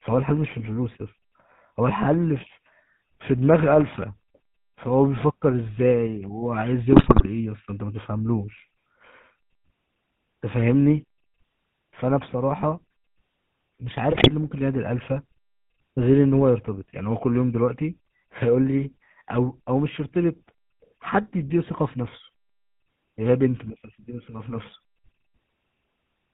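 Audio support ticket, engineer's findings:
GSM full-rate codec, whole clip: buzzy, gravelly texture, nothing above 4 kHz. Sound fits a 13 kbps full-rate stream: pulse-driven vocal-tract model, excitation decimated to every third sample, so fine spectral detail is lost and replaced by buzz.

GSM bit errors, 6.92–7.27 s and 14.12–14.31 s: squawks, pops, gargling; second burst harsher. Corrupted filter, pitch and gain parameters reaching the decoder warp the spectrum and spike the level per frame, consistent with a weak radio link.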